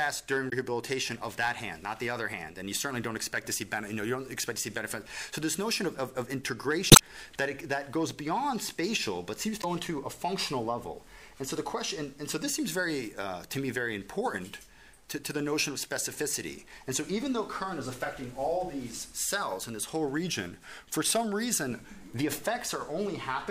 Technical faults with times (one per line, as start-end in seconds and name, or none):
0.49-0.54 damaged data in a compressed stream
6.89-7.00 damaged data in a compressed stream
9.62-9.64 damaged data in a compressed stream